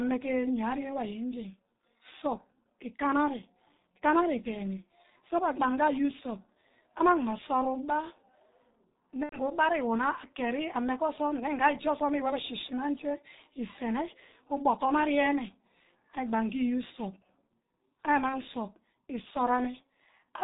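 The whole recording carries G.723.1 codec damage. The speech is band-limited below 4 kHz and sounds muffled and hoarse. Consonants smear. The voice model updates slowly, in coarse steps. The heavy damage fits a rate near 6 kbit/s.

From 9.23 to 9.39 s, VoIP packet loss is concealed by the speech codec. About 90 ms of audio went missing, three 30 ms frames. The decoder repeats its last pitch and filter at falling gain. The sound stretches into a buzzy tone or coloured noise that fades. At 18.29 to 18.39 s, a single 30 ms gap is patched the same way, and the voice stays weak briefly afterwards.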